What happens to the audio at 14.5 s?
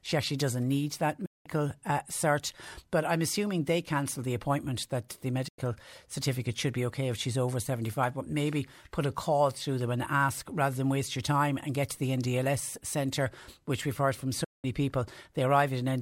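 At 14.44 s, just after "which we've heard from", a digital broadcast dropout mutes the speech with an 8 ms fade until 14.65 s. Unlike a network glitch, the receiver simply silences corrupted frames, so the lost audio never returns.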